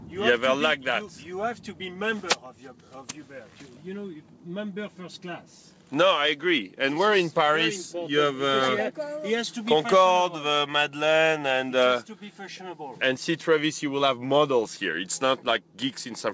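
No technical faults are audible.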